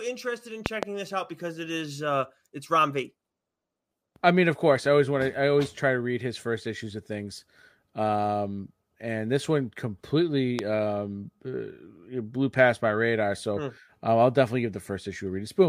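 Between 0.66 and 0.85 s, just after "interested in", a loud pop arrives as two sharp clicks in quick succession, peaking about 20 dB above the speech, which carries on underneath. A second, single pop at 10.59 to 10.61 s, just before "um uh blew past", is about 15 dB up. Each is likely a voltage step or pulse from a plug, switch or static, shaped by the downstream circuits. On the waveform they are tall, narrow spikes; on a spectrogram, thin vertical broadband lines.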